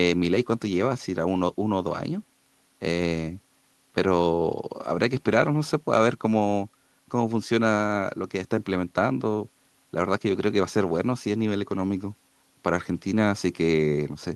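Listening to the speech in the clip, nothing technical stood out.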